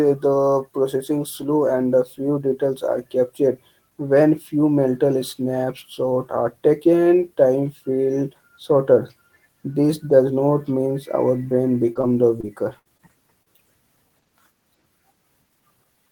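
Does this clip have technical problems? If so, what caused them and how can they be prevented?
Yes. Brief smears and wobbles at 11.93, 12.01, 12.41, 12.97, 13.43 and 13.56 s are short concealed packet loss: 20 to 40 ms of speech arrived too late and was patched by extending the previous sound. At 12.79 to 12.87 s a held buzz or fading hiss replaces about 60 ms of speech, a burst of packet loss that the receiver covered by stretching and fading the last sound. Both can be prevented with a steadier network path, such as wired rather than congested Wi‑Fi, plus a larger jitter buffer and forward error correction.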